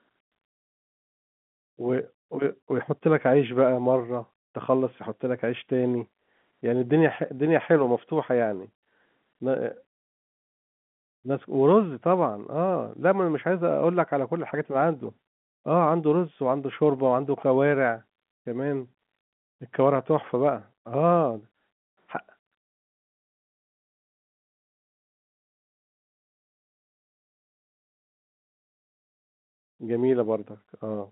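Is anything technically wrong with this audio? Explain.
No, the speech carries the ordinary telephone band of G.711 telephone coding, roughly 150 Hz to 3.5 kHz, with nothing wrong to report.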